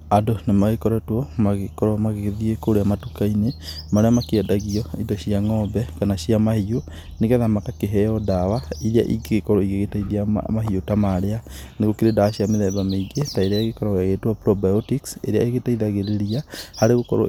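Nothing here sounds amiss: the speech runs along steadily with no faults to flag anywhere in the recording.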